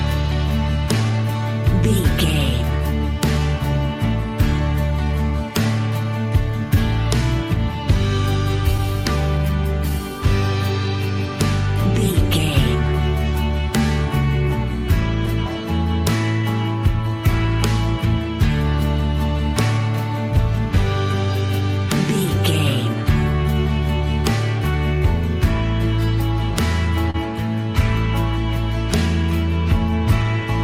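Clock drift between sender and receiver runs through the whole recording: the sending side's clock is about 1.5 percent slow relative to the receiver, so audio arrives a little too slowly and the jitter buffer keeps draining. Unlike a single network glitch, this mismatch is continuous and always pushes in the same direction, so the consequences are spread across the full length rather than concentrated at one point. Those consequences show up as repeated timing corrections from 0.22 s to 30.25 s. The receiver keeps repeating short slices to stretch the material and stay in step, with playback running at about 99 percent speed and roughly a third of a second added in total. Each insertion is tiny and unevenly spaced, so what comes through is a faintly unsteady tempo with occasional slight hiccups rather than a clean pitch shift; a resampling fix would alter pitch smoothly, whereas these are discrete edits. 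At 27.10 to 27.16 s there is a short stall from a late packet. The buffer ran empty, and the receiver held the last sound for 37 ms until the data arrived, then resumed from the same place, adding 37 ms of delay. Nothing is lost, which separates it from a dropout: instead of a gap or a jump, a sound lingers slightly too long with a faint buzzy or dipping quality.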